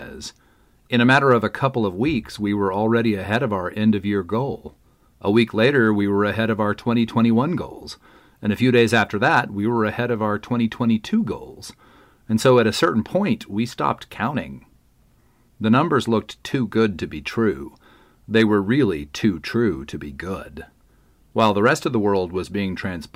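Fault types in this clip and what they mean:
Hard clipping: The speech peaks exceed what a stage in the chain can pass, so their tops are sheared flat. Those flat tops add harsh harmonics high in the spectrum. Here it shows as short bursts of crackle on loud passages at 1.11, 3.33, 8.77, 12.46, 18.36 and 21.39 s. The overload ranges from about 2 to 5 dB. The longest burst runs from 8.77 to 9.40 s at about 5 dB.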